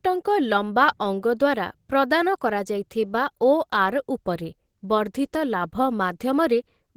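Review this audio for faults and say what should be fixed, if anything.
The speech was likely squeezed through low-bitrate Opus compression in its hybrid speech mode, and throughout the clip that leaves the voice muffled, hoarse and grainy, with plainly audible damage consistent with a stream around 16 kbps. To prevent it, encode at a higher bitrate so the encoder stays in its full music mode.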